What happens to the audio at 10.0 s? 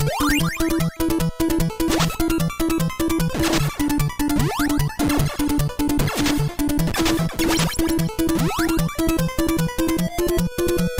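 Nothing goes wrong at 10.0 s; the audio there plays through intact, with no dropout, click, distortion or other fault.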